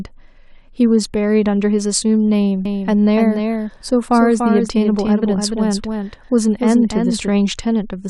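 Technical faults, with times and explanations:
2.65–7.29 s, doubled audio track: a slower capture path likely mixes in a copy, so the speech repeats roughly 300 ms late, about 5 dB quieter, starting and stopping abruptly.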